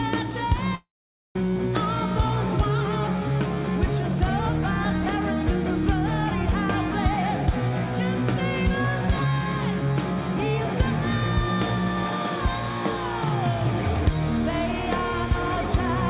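Audio carried over a call link, with nothing above 4 kHz, which fits a narrowband codec such as G.711 A-law. From 0.75 s to 1.36 s there is a long network dropout. The receiver stretches the last sound into a fading buzz for roughly a tenth of a second, then leaves near-silence for about 0.49 s. The audio resumes at 1.36 s with about 0.6 s of material missing, a gap most likely caused by packets lost in transit.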